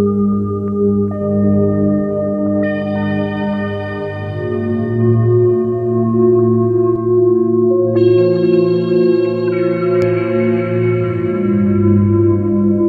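A recording of everyday sound with channel delay (comb filtering) between 6.96 and 10.02 s. Over that span one channel runs late by around 5 ms, and when the two are summed to mono the shared content cancels at evenly spaced frequencies, the first notch near 100 Hz and further ones every 200 Hz above it. The fixed notches make the sound hollow and phasey until 10.02 s, when the channels realign and the fuller tone returns.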